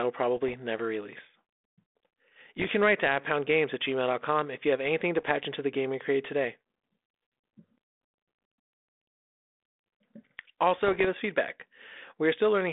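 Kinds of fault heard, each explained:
Bit errors on an ADPCM link: flipped bits upset the decoder's predictor and step size. Four brief bursts of pops and rough, jumpy level, the longest before "us feedback".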